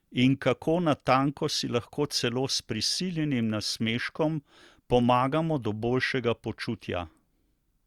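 Listening to this short speech recording, nothing stood out as a technical problem at any point.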